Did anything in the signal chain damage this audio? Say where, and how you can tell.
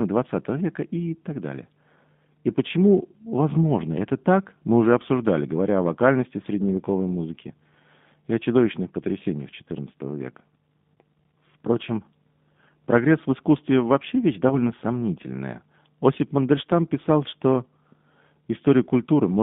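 Yes. The codec stage is the G.729 codec at 8 kbit/s, heard throughout. The speech sits in a line band of about 150 Hz to 3.6 kHz and has a rough, synthetic texture from pulse-coded excitation. Simple band-limiting would only sound muffled, not grainy.

At the network stage, VoIP packet loss concealed by the speech codec occurs from 14.49 to 14.66 s. The decoder stretches its last pitch and filter into a fading sound, which points to one lost 10 ms frame. Frame-to-frame dependency then keeps the speech weak or distorted for a while after packets return. A plain dropout would leave silence instead.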